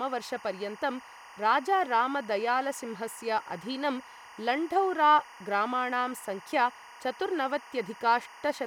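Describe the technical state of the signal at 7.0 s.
At 7.0 s you're still hearing the timecode bleed that runs under the whole speech clip. Linear timecode at 24 frames per second is leaking in, flipping between roughly 1 and 2 kHz, so there's a steady chirpy warble sitting about 20 dB below the speech.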